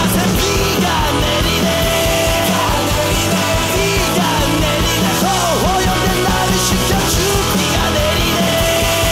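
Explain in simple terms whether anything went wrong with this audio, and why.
Nothing went wrong: no audible faults anywhere in the recording.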